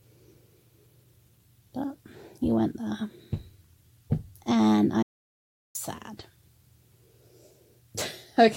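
At 5.03 s the sound cuts off mid-flow into an audio dropout to silence. The gap lasts until 5.75 s, so about 0.72 s of material is lost. The silence is total. No room tone or background hiss remains underneath. The likely cause is a brief loss of the input signal, such as a disconnected device, a failed link or an accidental mute, while recording carried on writing silence. The sound then resumes abruptly, mid-flow.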